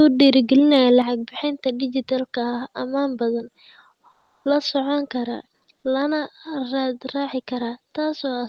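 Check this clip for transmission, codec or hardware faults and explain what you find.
Two faults are audible in the speech, both consistent with a call passing through an Opus-coded path whose upper limit around 12 kHz can be heard as a gentle top-end cutoff.

Microphone volume stepped down, at 1.02 s: the whole signal drops by about 6 dB in a single step, just before "bixinta digetalka". Voice and room sound fall together, with no fade, because the input gain itself moved rather than anything in the sound. This is likely the call software's automatic gain control cutting the device's input volume after judging the microphone too hot.

Comfort noise in place of the background, from 4.15 to 4.45 s: for about 300 ms the quiet room tone, sitting roughly 52 dB below the loudest speech, is replaced by smooth, uniform hiss about 1 dB quieter than the real background, losing its texture until sound resumes. 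The likely cause is discontinuous transmission in Opus: the sender stopped transmitting during the pause and the receiver generated shaped noise to fill the gap.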